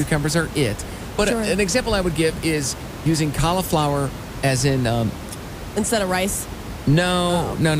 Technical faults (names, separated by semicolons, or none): none